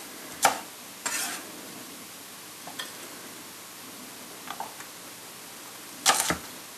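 No technical faults can be heard anywhere in this recording of everyday sounds.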